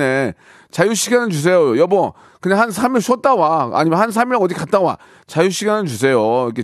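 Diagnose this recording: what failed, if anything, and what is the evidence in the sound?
Nothing in this recording failed.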